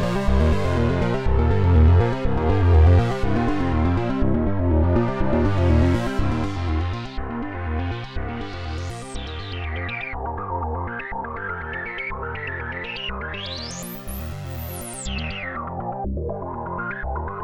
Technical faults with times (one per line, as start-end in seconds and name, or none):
none